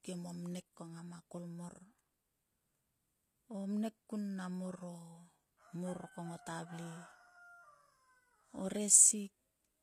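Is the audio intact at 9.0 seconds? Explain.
No. HE-AAC compression runs through the whole clip, including 9.0 s. Nothing remains above 14.9 kHz, and the rebuilt treble sounds gritty and lispy, likely from a low bitrate around 24 kbps.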